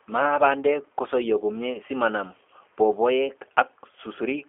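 Throughout, the speech sounds rough and synthetic, with nothing above 3.5 kHz. This is G.729 codec damage: each frame is rebuilt from a vocal tract filter and sparse pulses.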